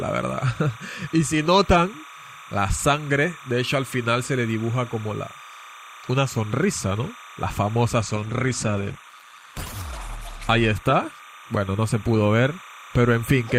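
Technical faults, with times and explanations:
throughout: timecode bleed. A steady chirping warble sits behind the sound at all times, roughly 20 dB below it. This is linear timecode leaking in from a nearby track or cable. Its square wave flips between pitches near 1 kHz and 2 kHz as the code's bits change, and the pattern repeats 30 times a second, which gives the chatter its rhythm. Mains hum is a fixed low tone, and a feedback whistle is a single growing pitch; this sound keeps jumping between two pitches.
8.17 to 12.65 s: call bitrate drop. The sound turns rough and watery and loses its top end. It is at its worst for about 1.9 s and then cleans up by 12.65 s. This fits the call's bandwidth estimate falling and the encoder cutting its rate from about 64 kbps to about 14 kbps. The coarser coding smears detail, and the high frequencies are cut off. Packet loss would leave dropouts and repeated fragments. 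Here the audio never stops, and the quality sinks and then recovers.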